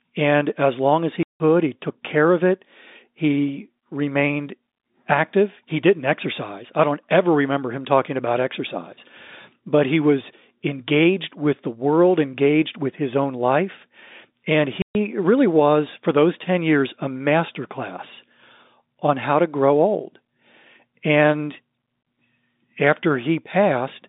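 Packet loss filled with silence cuts hard-edged holes at 1.23–1.40 s (170 ms, after "as long as") and 14.82–14.95 s (130 ms, before "really was for those"). The lengths fit 10 ms packets. Dead silence, not repeated or smeared sound, marks missing concealment. The telephone band stays audible throughout.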